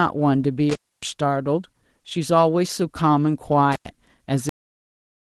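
At 0.70 to 1.03 s and again at 3.72 to 3.88 s, an intermittent contact briefly opens the line, for about 273 ms and then about 98 ms. The speech cuts out with crackle at each edge and faint hiss in the gap, unlike a clean digital dropout. At 4.49 s the clip has a cut-off end. The speech halts mid-sound and drops straight to digital silence with no decay, so it is not a fade or a natural ending. Beneath all of this, the light Opus voice compression at 20 kbps leaves only mild codec colouring.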